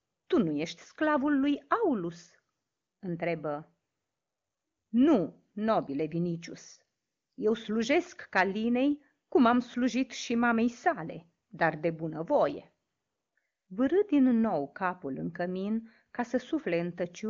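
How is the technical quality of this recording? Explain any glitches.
No glitches to explain here: this is wideband phone-call speech, with nothing above 7.3 kHz and the kind of clarity that fits the AMR wideband (HD Voice) codec running at or near its top rate.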